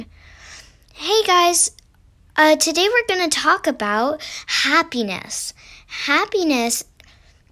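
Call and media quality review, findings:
No audible faults found.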